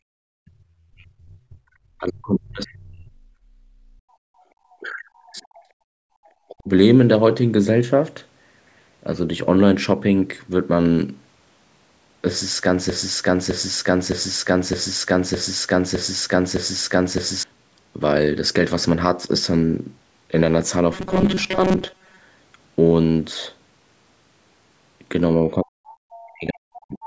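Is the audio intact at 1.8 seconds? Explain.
No. At 1.8 seconds the speech is near the end of a suppressed stretch running from about 0.18 s to 1.84 s. This is speech suppressed in double talk, likely from an echo canceller that could not tell the near talker from loudspeaker echo while both sides spoke, so it pulled the level down. The speech dips or breaks up, with the deepest drop roughly 40 dB, over about one and a half seconds.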